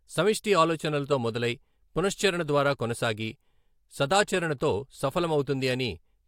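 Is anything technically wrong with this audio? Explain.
No, nothing is technically wrong with this audio.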